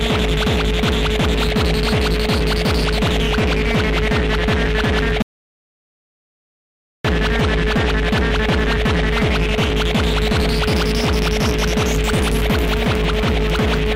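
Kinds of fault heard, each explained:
audio dropout to silence: The sound cuts off abruptly at 5.22 s and stays completely dead until 7.05 s, so roughly 1.8 seconds vanish with no room tone or hiss underneath. It comes back in mid-flow rather than fading in. That kind of flat, absolute gap most likely means the input went away for a moment, through a loose connection, a dropped link or an accidental mute, while the recorder kept writing silence.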